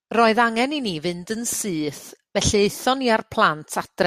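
Nothing goes wrong anywhere in this speech recording, so there's no technical fault to point to.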